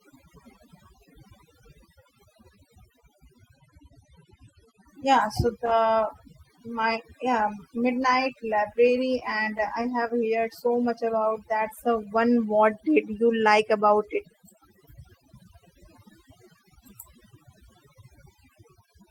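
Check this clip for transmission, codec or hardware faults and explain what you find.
Three faults can be heard: overdone noise removal across the whole clip, a burst of scattered short gaps, and a brief jitter buffer slow-down just after it.

Throughout, the background sits at near silence with small twinkling specks in it. This is overdone noise removal. The noise reduction was set too aggressively, so every frequency band close to its noise estimate was pushed far down or cut outright. The quieter parts of the speech fell under that threshold and were stripped away with the noise, leaving isolated surviving bands that flicker on and off.

From 9.19 to 10.45 s, just after "my yeah midnight library", there are about seven tiny ticks and smears while the speech otherwise stays clear. These are scattered short gaps. Packets went missing or arrived late one at a time, and the receiver covered each small hole by extending the sound it had just played. 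Each patch is very short, the longest around 15 ms, and together they fill only about a tenth of a second.

From 10.67 to 11.30 s the speech runs slower at an unchanged pitch, so sounds are drawn out. This is a jitter buffer slow-down. The receiver's buffer was running low or had just raised its target delay, so it repeated single pitch periods and fragments of pauses to build up a reserve. That stretch plays at 92% speed and gains 57 ms in total.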